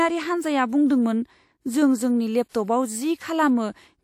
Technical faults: pre-echo

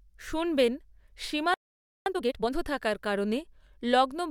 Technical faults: playback stall; time-compressed catch-up

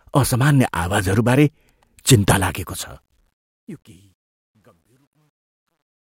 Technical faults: truncation distortion on a fade

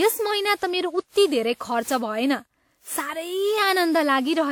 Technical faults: generation loss

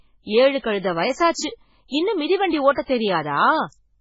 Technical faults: MP3 compression; pre-echo

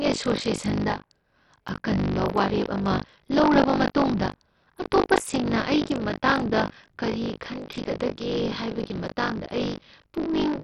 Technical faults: buffer tearing; Bluetooth SBC compression

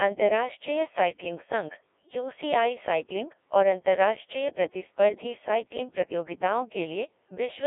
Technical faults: Codec 2 vocoder

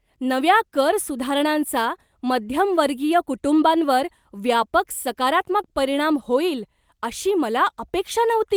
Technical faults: none

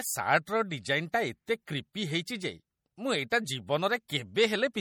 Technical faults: MP3 compression

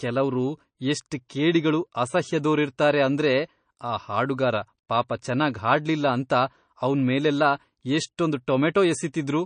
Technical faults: MP3 compression; pre-echo

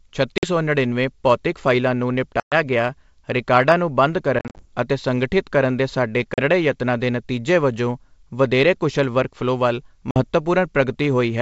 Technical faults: packet loss on an ADPCM call

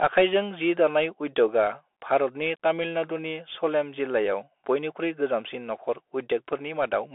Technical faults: Bluetooth CVSD headset codec

